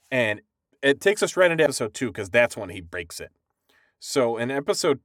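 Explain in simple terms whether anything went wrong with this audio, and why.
Compressed frames were skipped at 1.65 s, after "takes us right into", and at 2.93 s, after "cuz that's when he". A few damaged or missing chunks were dropped each time, so the sound jumps ahead by roughly a tenth of a second the first time and about 70 milliseconds the second.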